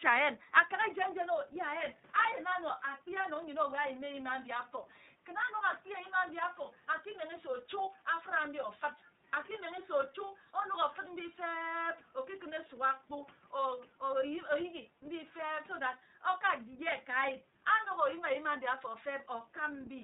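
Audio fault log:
throughout iLBC codec. The speech is band-limited, with nothing above 4 kHz, so it sounds narrow. Each frame's excitation is coded alone, leaving a plainly audible rough, synthetic edge. This fits the 30 ms, 13.33 kbps mode. Room noise sits about 33 dB below.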